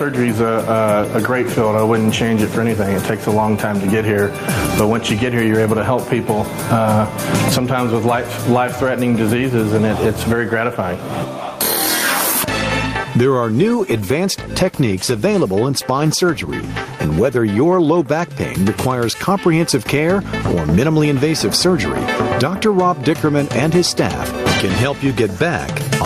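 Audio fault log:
Throughout, gain pumping: the level swings by around 15 dB. The likely cause is input gain set far too high for the microphone, so that a fast limiter or compressor clamps down on every peak and releases in the quiet stretches. Loud and soft passages end up pressed close together, and the sound comes across squashed and breathing.
13.57 to 18.85 s, call bitrate drop: the sound turns rough and watery and loses its top end, and it stays at its worst for about 3.5 s before clearing. This fits the encoder being throttled from around 48 kbps to roughly 17 kbps after the connection's bandwidth estimate fell. With so few bits, detail is coded coarsely and high frequencies are discarded, leaving a muffled, smeared quality until the rate climbs back.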